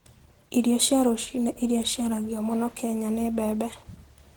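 Opus voice compression runs throughout the clip. The speech sounds hoarse and slightly robotic, while the top end still reaches about 20.2 kHz. That pattern fits hybrid mode at a low bitrate, around 16 kbps: a linear-prediction coder handles the band below 8 kHz with a roughly quantised excitation, and a transform layer thinly fills the range above it. The damage is plainly audible.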